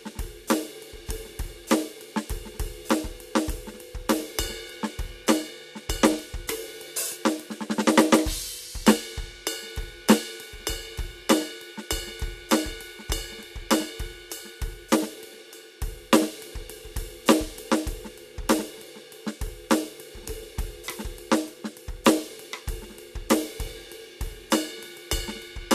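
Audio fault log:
Nothing to log here; the music runs along without a single fault turning up anywhere in it.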